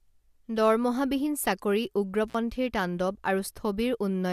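Speech with an intermittent contact fault from 2.28 to 2.35 s: a loose connection opens for about 50 ms, so the audio drops out with crackle at each edge. A waveform shows a short gap; a spectrogram shows a narrow vertical hole bracketed by broadband clicks.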